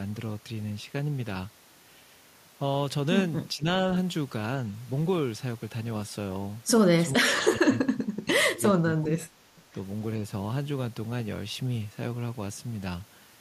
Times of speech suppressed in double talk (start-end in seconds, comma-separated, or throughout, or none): 3.54-3.66, 7.16-9.49